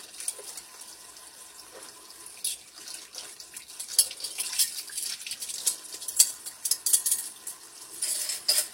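A recording of sounds with nothing above 16.3 kHz throughout, a flat ceiling on a spectrogram. It is likely low-bitrate audio saved at a high bitrate: the sound fits a 32 kbit/s HE-AAC source re-encoded as 320 kbit/s MP3, which cannot restore the missing band.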